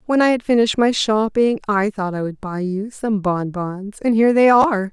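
At 4.62 to 4.64 s, near the end of the speech, there is a brief case of chunks out of order. One 10 ms chunk arrived late by one chunk and plays after its neighbour, so the two swap places. Nothing is missing, but the sound briefly jumbles. On the waveform, three abrupt discontinuities sit within that 20 ms span; the spectrogram shows thin vertical broadband lines there.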